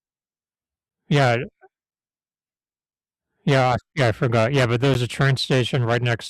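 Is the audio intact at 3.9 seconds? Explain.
No. At 3.93 s there is a gap between stream segments: the time stamps of two adjacent pieces of the stream, which run about 1 s each, fail to meet, leaving roughly 14 ms unaccounted for. The player covers that hole with silence, so the speech drops out abruptly with hard edges on both sides, a brief clean blank just before "yeah I forgot". Nothing is missing from the speech itself; it is pushed about 14 ms later.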